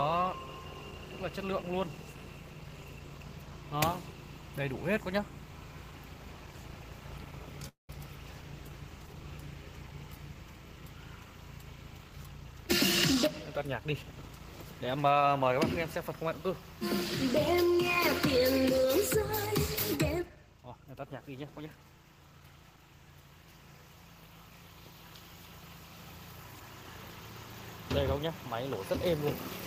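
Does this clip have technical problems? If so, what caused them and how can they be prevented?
Yes. A call audio freeze, likely from packets held up in transit so the jitter buffer ran empty, runs from 7.68 to 7.90 s. The receiver stretched the last sound into a fading buzz for about 205 ms, silent for the final 130 ms, then resumed where it stopped, losing nothing but adding 205 ms of delay. Keeping the jitter buffer deep enough to ride out such delivery stalls, or giving the call traffic network priority, would prevent this.

A jitter buffer speed-up follows. The buffer held more audio than its target, so the receiver trimmed short pitch-period pieces repeatedly: from 11.99 to 12.63 s at 119% speed, removing roughly a sixth of a second, then from 13.15 to 14.23 s at 107%, removing under a tenth. The sound runs faster at unchanged pitch and feels hurried. Draining the excess more gently over a longer stretch would make the catch-up much less noticeable.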